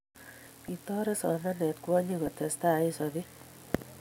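Between 0.46 and 0.69 s the speech picks up short blips of noise in individual sub-bands, and a brief burst of the same kind returns at 2.26 s. This is DAB burbling. Weak reception let a small fraction of bit errors slip past the error correction into the MP2 audio data. Corrupted samples put short blips of noise in single sub-bands.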